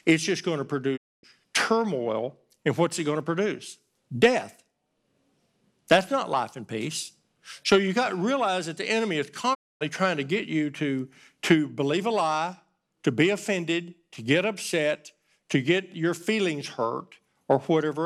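At 0.96 s the speech quickly fades out over about 20 ms and goes silent until 1.25 s. The same hole recurs from 9.53 to 9.83 s. Each gap is a digital broadcast dropout. The receiver stopped getting decodable frames, muted, and resumed once valid frames returned. The speech in between is simply gone. Each 256 ms gap fits a run of eight lost 32 ms frames.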